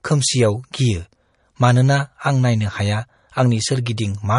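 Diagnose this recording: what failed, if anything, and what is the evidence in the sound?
The failure sits at the codec stage and runs through the whole speech clip. Nothing is present above 10.5 kHz, a hard ceiling that a high-bitrate MP3 would not impose, and the sound carries the artefacts of heavy MP3 quantisation. This is likely low-bitrate audio saved at a high bitrate: the cut-off fits a first MP3 pass at around 40 kbit/s, later re-encoded at roughly 256 kbit/s, which preserved that damage but could not restore the missing detail.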